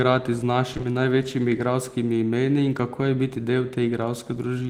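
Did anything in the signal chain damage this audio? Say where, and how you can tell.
Yes, short concealed packet loss at the network stage: three back-to-back gaps at 0.73, 0.77 and 0.81 s, ending near 0.85 s, smear the speech. Each hole, about 20 ms, was patched by extending the preceding sound, then crossfaded back into real audio.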